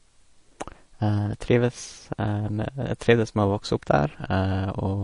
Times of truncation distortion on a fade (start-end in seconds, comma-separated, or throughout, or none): none